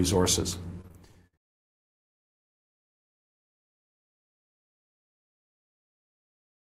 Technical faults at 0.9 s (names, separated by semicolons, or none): repeated packet loss (robotic sound)